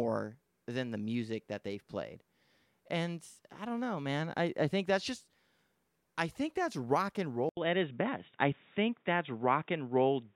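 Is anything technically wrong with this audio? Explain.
Yes. From 7.49 s to the end, after "think that's rock and", an 80 ms gap opens, then the speech turns dull, with nothing above 3.8 kHz and a faint new noise floor. This is likely an input switched to a poorer device, whose narrower band cuts the top end.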